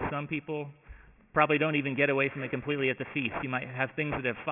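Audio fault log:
Throughout, aliasing: the sound was brought down to a much lower sample rate, which fits a drop from 48 kHz to 6 kHz, with no filter beforehand. Everything above the new 3 kHz limit folds back beneath it at unrelated, wrong pitches, sitting only about 10 dB under the wanted sound. The high end turns gritty and metallic, and the spectrum runs hard right up to the 3 kHz edge.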